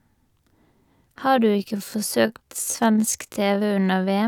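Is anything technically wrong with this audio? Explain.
Yes. There is a time-stretched section from 1.28 s to the end of the clip. From that point the speech is slowed to about 0.65 times its original pace while its pitch stays the same. This is likely the work of software stretching the audio to fill a longer duration by repeating short slices of the waveform. The sudden drop in tempo makes the slowed portion drag.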